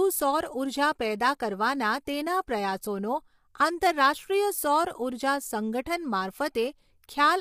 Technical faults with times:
0.00-7.41 low-delay AAC compression

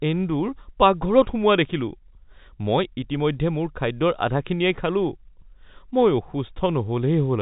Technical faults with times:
none

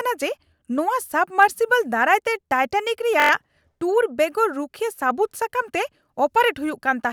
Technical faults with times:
3.20-3.31 system hang loop

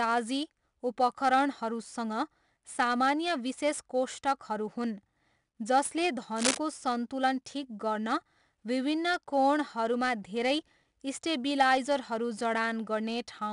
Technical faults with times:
0.00-13.53 4-bit ADPCM compression
6.36-6.58 cable scratch noise

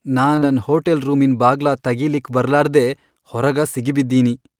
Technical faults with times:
0.35-0.43 short concealed packet loss

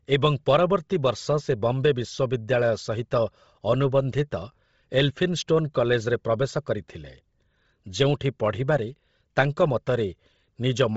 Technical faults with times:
0.00-10.96 Bluetooth LC3 compression

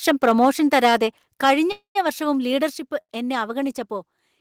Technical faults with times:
0.45 microphone volume stepped down
1.44 microphone volume stepped down
1.44-1.53 microphone overload
1.72-1.97 call audio freeze
2.70 microphone volume stepped down
3.01-3.11 short stall from a late packet

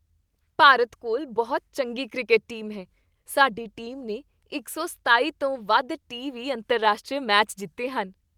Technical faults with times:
none

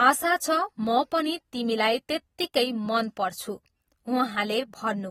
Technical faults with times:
0.00-5.11 AAC compression

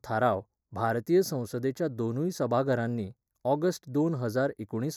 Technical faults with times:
0.00-4.96 channel delay (comb filtering)

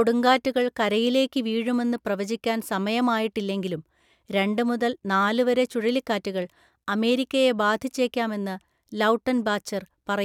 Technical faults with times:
none

